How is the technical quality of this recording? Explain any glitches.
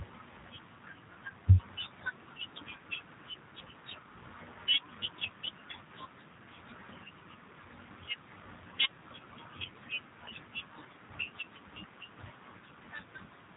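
The speech has been through a low-bitrate telephony codec, with audible damage across the whole recording.

Throughout, the G.729 codec, consistent with about 8 kbit/s, rebuilds speech from a vocal-tract filter and sparse pulses, leaving it rough, slightly synthetic and cut off above 3.8 kHz.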